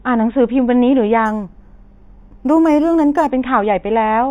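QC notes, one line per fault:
1.26–3.30 s, imaging from linear upsampling: straight-line rate conversion, apparently from 8 kHz to 48 kHz, leaves a faint mirror image at 4–8 kHz, heard as dulled highs with a light metallic shimmer.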